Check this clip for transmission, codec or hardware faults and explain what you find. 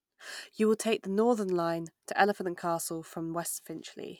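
No faults turn up anywhere in the clip.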